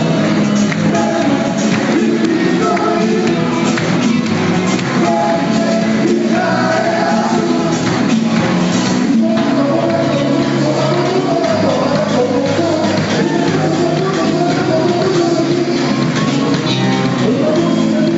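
Gain pumping runs through the whole clip. The gain swings around 5 dB. Loud and soft parts sit close, so the sound feels squashed. The likely cause is gain set far too high, with a fast limiter pulling it back.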